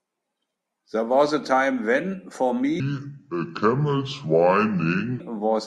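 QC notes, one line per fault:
2.8–5.2 s: section at the wrong speed. From 2.8 s the speech drops to about 0.7 times its recorded speed, so it turns deep and drawn out, roughly seven semitones lower, until it snaps back at 5.2 s. Pitch and tempo fall together, which separates this from a pitch shift or a time-stretch, where only one changes. The likely cause is this stretch being played or resampled against the wrong clock rate.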